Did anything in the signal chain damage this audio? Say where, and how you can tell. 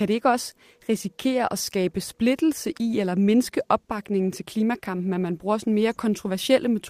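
No, nothing in the signal chain audibly damaged this speech recording. Listening closely, no moment stands out that would point to any particular stage, from capture through to playback.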